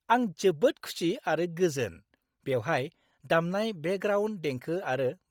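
A speech clip with heavy codec damage throughout: the top end sounds thinned out and filled with grainy, breathy hiss, and the voice carries a papery edge. That's likely Bluetooth LC3 compression, and the artefacts fit a low rate around 32 kbps with 10 ms frames.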